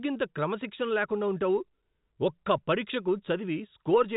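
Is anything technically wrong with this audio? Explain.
No, this is speech carried over ordinary G.711 telephone coding, which caps the bandwidth at 4 kHz and adds only its faint level-following hiss, and nothing in it points to a fault.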